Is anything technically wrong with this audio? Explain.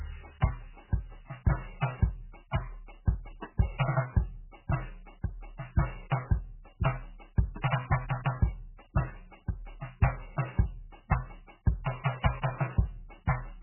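Yes. Throughout the music, nothing is heard above 3 kHz, and the sound is heavily watery and swirling. This is likely MP3 compression at a very low bitrate, around 8 kbps. Short of bits, the encoder cut the treble and dropped weak frequency lines, which flicker between frames.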